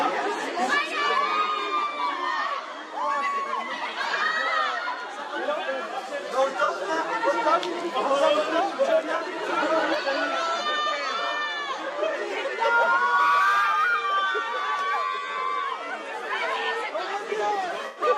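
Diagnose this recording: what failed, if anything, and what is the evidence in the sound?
Codec stage: AAC frame loss with concealment. Smeared, phasey patches at 6.64–6.69 s and 9.16–9.21 s (about 43 ms each, consistent with two lost frames) and 107 ms at 17.86–18.02 s. The decoder recycled the last good spectrum, so spectrograms show blurred, flattened bands.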